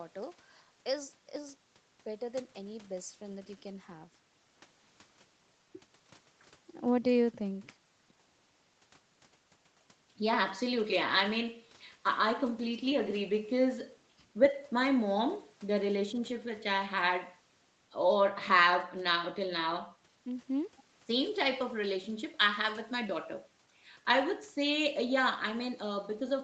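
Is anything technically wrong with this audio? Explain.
No, nothing's wrong here; it's ordinary speech that's been through a typical call chain, with the microphone processing and an Opus codec at 32 kbps leaving nothing above 8 kHz, which is just how that path sounds.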